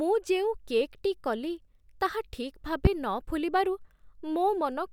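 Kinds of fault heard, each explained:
Loud pop: one sharp pop from 2.85 to 2.89 s, right after "କଲି ତାହା ଠିକ୍", likely a voltage pulse added to the signal. It peaks about 20 dB above the speech, which carries on underneath. The waveform shows a tall, narrow spike, and the spectrogram a thin vertical stripe across all frequencies.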